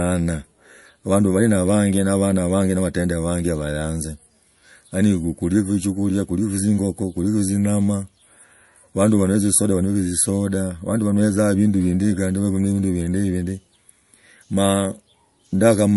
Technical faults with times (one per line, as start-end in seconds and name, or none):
0.00-15.96 MP3 compression